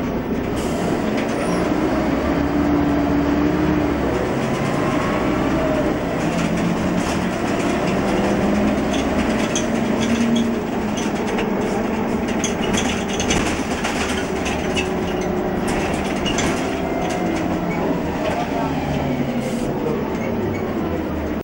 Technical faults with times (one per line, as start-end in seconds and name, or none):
0.00-21.43 video or display buzz